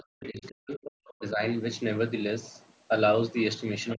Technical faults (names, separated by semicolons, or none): speech suppressed in double talk; other side's voice leaking through